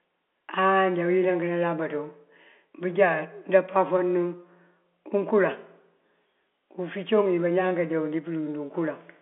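Nothing here is technically wrong with this bit of speech, which simply carries the narrow sound of an ordinary G.711 phone line, with nothing above about 3.7 kHz.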